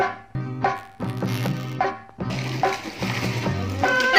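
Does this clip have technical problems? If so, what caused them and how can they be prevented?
Yes. There's damaged data in the compressed stream at 0.35 s and again at 2.30 s. Each is a brief disruption where the decoder hits corrupted bytes, loses sync and hunts for the next frame header. Carrying the stream over a checked, reliable transport and keeping metadata out of the audio payload would prevent it.

From 0.75 to 1.76 s there's buffer tearing, a steady robotic buzz at about 93.8 Hz, which fits a 512-sample buffer. The writer and the hardware read position have drifted together, so a small slice of each period is stale audio from roughly 20 ms earlier, hard-spliced in. Keeping the write pointer a safe margin ahead of the read pointer, or using a larger buffer, would stop it.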